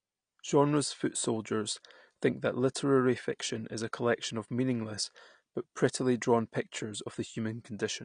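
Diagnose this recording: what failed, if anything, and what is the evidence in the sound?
The codec stage is the weak point. The speech is dull and plainly swirly the whole way through, with nothing above 9.7 kHz, which fits AAC compression at a low bitrate around 32 kbps, likely AAC-LC, trimming the top band and coarsely quantising what's left.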